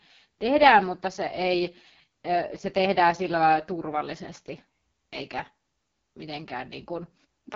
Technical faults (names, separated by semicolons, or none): AMR wideband (HD Voice) codec